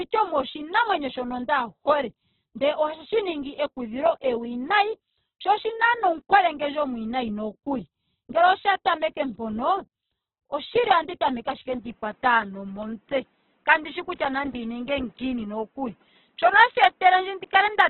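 From the first second to the end, the speech sounds rough, grainy and noisy, with tones breaking into a hiss-like texture and the whole band squeezed to a narrow, telephone-like range. This is likely heavy Opus compression in its music (CELT) mode at a very low rate, around 8 kbps. At that rate the encoder cannot code each band faithfully. It keeps the overall energy of each band but fills in the detail with folded or noise-like content.

At 11.73 s, just after "oshili ohandi tameke ashike", the sound turns duller and boxier with no gap. Nothing survives above about 3.8 kHz, the level shifts by roughly 5 dB, and a faint new background noise sits well below the speech. It stays this way to the end. This likely reflects an input switched to a poorer device, a narrower-band microphone or headset profile with its own tone, gain and noise floor.

From 12.83 s to 14.66 s, a run of ten short ticks or tiny dropouts falls at a steady rate of about five or six a second. 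The longest lasts a few milliseconds, and the ticks are of uneven strength. These are CD scratch ticks. Once per disc revolution, a blemish wipes out more data than error correction can rebuild, and the player patches or mutes the damaged samples.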